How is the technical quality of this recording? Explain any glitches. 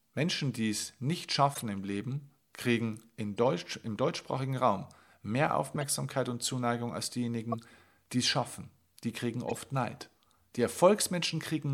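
The speech is marred by five short chirps and bursts of noise, all from the same fault: a corrupt frame decoded. They fall at 1.54–1.63 s just after "die es nicht", at 3.37 s after "kriegen in", at 5.74–5.83 s, at 7.52–7.55 s just before "die es schaffen", and at 9.49–9.59 s. Most are fairly loud, peaking around -20 dBFS. The one at 3.37 s is a faint blip near -45 dBFS. Each sounds like a squeaky or noisy smear lasting from a few tens of milliseconds to about a tenth of a second, except the 3.37 s blip, which is only 14 ms long. The cause is damaged data in the compressed stream. Flipped bits inside a frame made the decoder misread gains or spectral codes, so it placed energy at the wrong frequencies and played the frame anyway. The longer events span roughly a handful of consecutive frames. The brief one at 7.52 s fits a single bad frame.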